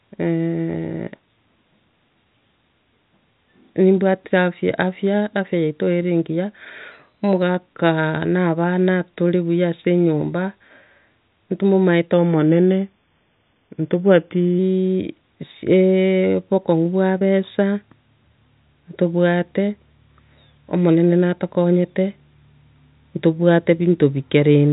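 From 12.13 to 14.59 s the speech slows by 5.66% and drops about a semitone (−101 cents), then snaps back, likely a drift correction step in clock-matching software. At 17.19–17.23 s and 21.63–21.66 s, short concealed packet loss fills roughly 20 ms gaps with extrapolated sound, heard as brief smears in the telephone-band audio, which stops at 4 kHz.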